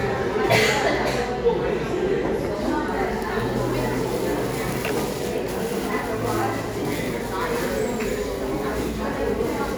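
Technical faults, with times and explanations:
No technical faults are audible: the signal stays continuous and steady, with no gaps, level jumps or added noise at any point.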